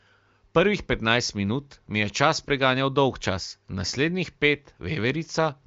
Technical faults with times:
none

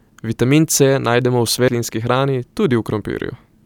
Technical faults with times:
1.68 compressed frames skipped

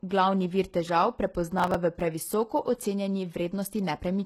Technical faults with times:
0.00-4.25 HE-AAC compression
1.51-2.01 processor overload crackle

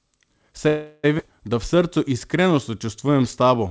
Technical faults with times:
0.68-1.05 call audio freeze
1.17-1.20 skip ahead
1.75-3.70 jitter buffer slow-down

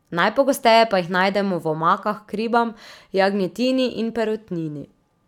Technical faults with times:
none

